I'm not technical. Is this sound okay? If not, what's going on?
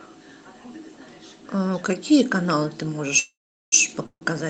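No. There are two call audio freezes, likely because pieces of the call got held up in transit and the receiving end ran out of audio to play. From 3.19 to 3.74 s it stretches the last sound into a fading buzz, then goes quiet for about 0.4 s. A shorter one follows at 4.06 to 4.25 s. In both cases the sound picks up where it left off, so nothing is lost; it is just paused.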